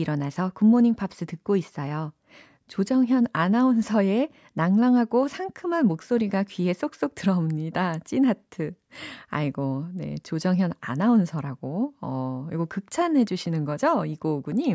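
No audible technical faults.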